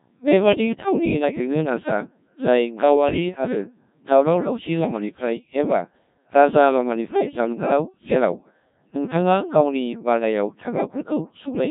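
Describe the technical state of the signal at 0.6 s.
At 0.6 s the speech is passing through the Codec 2 vocoder, as it does for the whole clip, with heavy damage that fits a rate of about 1.3 kbit/s. Only pitch, voicing, energy and a coarse spectral envelope survive, and the decoder rebuilds the voice from sine waves, so it sounds robotic and buzzy.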